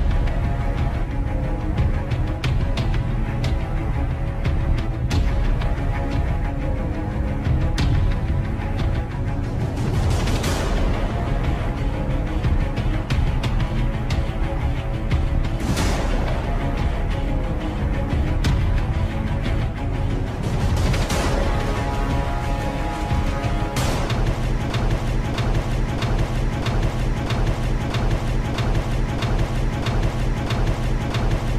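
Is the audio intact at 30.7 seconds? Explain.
No. At 30.7 s the audio is inside a broken-record loop running from 24.70 s to the end: a 0.64 s fragment repeats exactly, back to back, eleven times. A stalled player or stream likely kept resending its last buffer, so the intended audio is lost.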